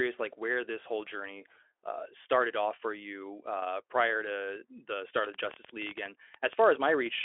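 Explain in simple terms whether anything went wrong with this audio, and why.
Right after "prior to the start", from 5.25 to 7.07 s, a train of clicks ticks unevenly, about thirteen a second. Likely cause: electrical interference or a faulty connection or power supply.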